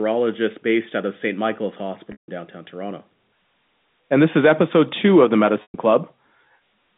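At 2.12 s and again at 5.62 s the speech briefly holds a buzzy, repeated tone that fades to silence before resuming, for 160 ms and then 120 ms. This is packet loss with pitch repetition: the receiver looped the last pitch period to cover missing packets, most likely 20 ms ones, within the narrow 150 Hz to 3.7 kHz telephone band.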